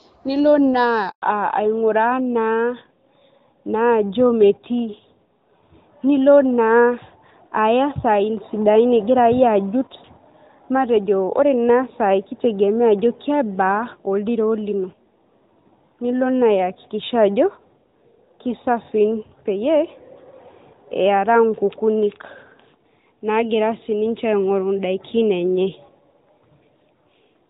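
A handover gap at 1.10 to 1.22 s cuts the speech to silence for 120 ms, as no frames arrived while the call switched networks. A fallback to narrowband follows at 1.22 s and lasts to the end: the clear HD Voice sound drops to a duller, rougher narrowband codec with nothing above 4 kHz.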